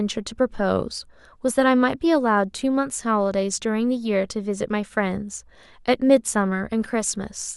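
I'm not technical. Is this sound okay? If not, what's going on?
Yes, nothing is wrong with this recording.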